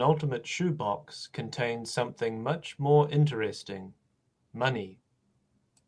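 No technical faults are audible in this speech.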